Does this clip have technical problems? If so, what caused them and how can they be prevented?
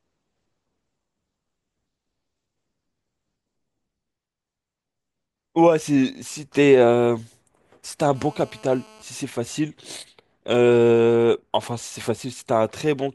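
Yes. GSM phone buzz runs from 8.15 to 9.03 s. A 2G phone on a call nearby bursts its transmitter 217 times a second, and the audio circuitry rectifies those pulses into a steady, raspy buzz about 28 dB below the speech. A spectrogram shows even horizontal stripes at 217 Hz and its harmonics. Keeping phones switched off or well away from microphones and cables prevents it.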